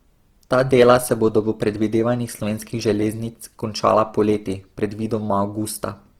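Throughout the speech, the signal has likely been through Opus compression in CELT mode at a starved rate, one that fits 16 kbps. Band energies survive, but detail is rebuilt from folded or noise-filled bands, so the sound turns plainly rough and grainy despite reaching about 20.2 kHz.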